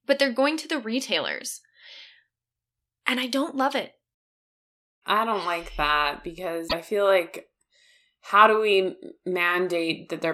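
At 6.68 to 6.73 s, after "I don't like that", the speech jumps ahead. Likely a broken MP3 bit reservoir.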